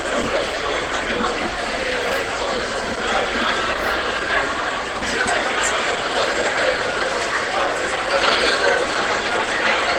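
From start to finish the sound is coarse, grainy and hoarse, with tonal parts turning rough and noisy rather than swirling. This is Opus compression, likely at a low rate, which fits about 16 kbps in hybrid mode. The encoder keeps each band's energy but fills the upper bands with folded or noise-like content. On a spectrogram the full bandwidth stays occupied without holes, but high-frequency detail looks smeared and speckled. The waveform shows nothing unusual.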